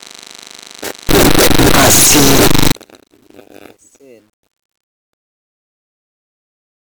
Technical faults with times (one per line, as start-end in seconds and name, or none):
1.09-2.72 signed and unsigned mixed up